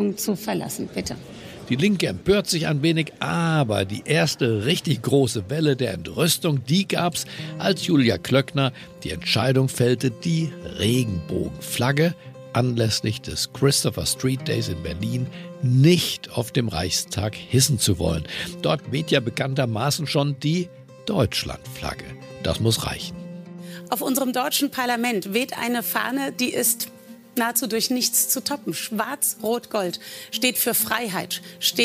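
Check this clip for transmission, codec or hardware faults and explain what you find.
Nothing stood out on listening to this clip.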